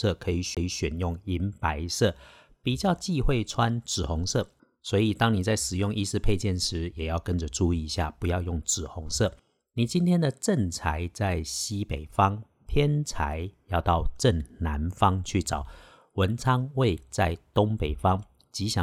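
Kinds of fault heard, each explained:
CD skip: a tick and a very short mute near 0.55 to 0.57 s, then the speech resumes elsewhere, as the player's laser jumped to another turn of the disc.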